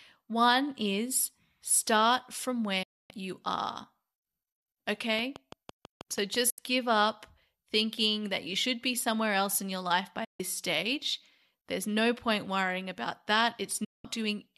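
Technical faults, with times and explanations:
2.83–3.11 s, 6.50–6.59 s, 10.24–10.40 s, 13.84–14.05 s, digital broadcast dropout: the speech fades out over 8 ms into silence for 264, 72, 144 and 192 ms as the receiver mutes on lost frames. The gaps point to frames of about 24 ms. The first falls between "is start from" and "you are", and the third follows "else in your life". On a waveform they show as flat gaps, and on a spectrogram as blank vertical bands.
5.19–6.36 s, train of clicks: about seven evenly spaced pops at roughly 6 per second, peaking around 5 dB above the speech, just before "give up thinking that". The likely cause is interference injecting a repeated pulse. The clicks appear as thin vertical lines on the spectrogram and as sharp spikes on the waveform.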